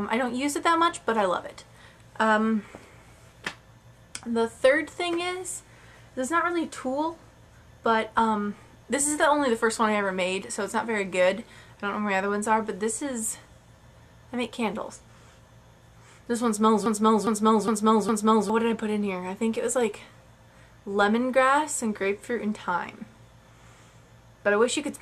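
At 16.86 s a broken-record loop begins and runs until about 18.50 s. A fragment 409 ms long plays four times back to back, each pass an exact copy, with nothing new in between. The likely cause is a stall in the player, encoder or stream, which kept resending the last piece it held, so the audio due in that stretch is lost. Unlike an echo, the repeats neither fade nor overlap.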